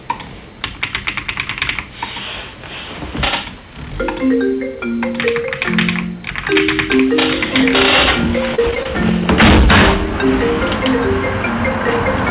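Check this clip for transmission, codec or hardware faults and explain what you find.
Two faults stand out: constant overload, and a short burst of dropouts near the end.

Hard clipping runs through the whole clip. The sound is pushed about 30 dB past what one stage can pass, so a few percent of samples have their peaks sheared flat. Those flat tops create high harmonics. Every loud event carries a harsh, buzzy fuzz.

Repeated packet loss (robotic sound) occurs from 8.55 to 8.86 s. Four short gaps appear, the longest 29 ms. About 68 ms is patched by stretching the preceding sound forward. The stretch turns choppy, with fragments missing. Nothing is heard above 4 kHz, which fits a telephone-band call codec.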